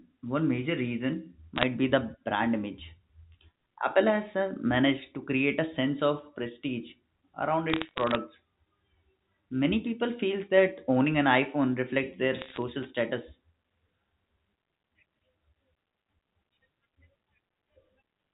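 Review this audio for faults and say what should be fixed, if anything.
Bit errors on a digital phone line produce three bursts of crackle: 1.56 to 1.63 s, between "one major reason" and "be the brand image"; 7.70 to 8.15 s, right after "sense of prestige around"; and 12.38 to 12.57 s, after "reflects their". Flipped bits in the G.711 stream, well under one percent of them, each corrupt a single sample. Hits on sign or high-order bits become sharp ticks over the unchanged speech, which stays band-limited below 4 kHz. On a waveform these show as isolated single-sample spikes. A spectrogram shows them as thin vertical lines spanning the full band. Preventing this means fixing the noisy transmission link, or carrying the audio over a path with error detection and correction.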